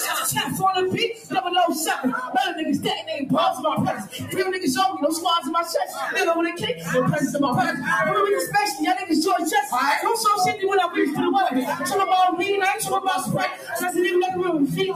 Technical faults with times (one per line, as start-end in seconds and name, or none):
0.00-14.96 noise suppressor applied to music or sounds
1.14-1.34 sound cut by the noise suppressor
3.97-4.37 sound cut by the noise suppressor
6.53-6.86 sound cut by the noise suppressor
13.51-13.75 sound cut by the noise suppressor